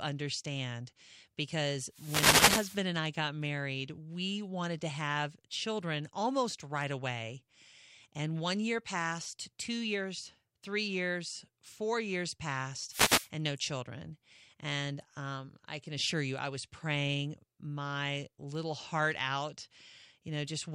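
At 1.90 to 2.86 s and again at 12.88 to 13.30 s, a wireless microphone noise hit interrupts the speech: the FM radio link fades as reflections cancel, receiver hiss swells into a swish of static, shown as broadband vertical noise bands and a thickened, ragged waveform.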